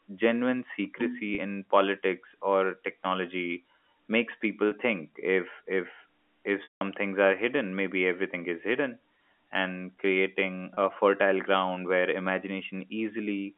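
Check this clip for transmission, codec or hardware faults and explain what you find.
Four brief dropouts are audible, all packet loss with pitch repetition. At 1.35 s, just before "in politics or technology", at 4.68 s, and at 10.74 s, between "is hidden and creating" and "fertile ground where", a 30 ms gap sounds like a momentarily held, buzzy sliver of the preceding sound. This is consistent with a single lost packet each time. At 6.63 to 6.81 s, after "think if if if", a longer 180 ms loss begins with the same buzz, then fades toward silence before "things are hidden maybe" returns through a short cross-fade. That fits about six consecutive packets going missing. In every case the receiver bridged the gap by repeating the last pitch period and fading it out. The narrow band of roughly 250 Hz to 3.4 kHz heard throughout comes from the G.711 telephone coding the clip passed through.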